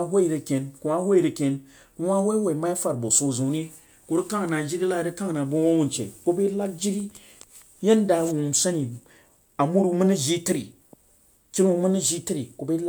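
No technical faults can be heard anywhere in this speech recording. Nothing in it calls for a timestamp or a note of any kind.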